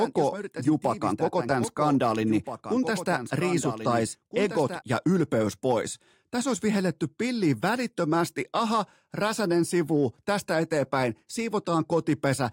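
From the start until 4.82 s, a doubled audio track sits under the speech: a dry, full-band copy trailing by roughly one and a half seconds, about 10 dB down. A slower second capture path is the likely cause. The copy stops abruptly at 4.82 s.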